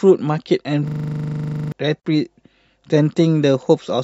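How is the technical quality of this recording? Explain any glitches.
The recording has two clear technical faults.

From 0.88 to 1.72 s, a system hang loop occurs: the computer stalled while the audio hardware kept replaying a 40 ms buffer, producing a rigid 25 Hz buzzing stutter and losing about a second of speech.

At 2.0 s, a gap at a join of encoded pieces appears: separately encoded segments were spliced without trimming encoder padding, leaving a 45 ms silence with smeared edges before speech resumes.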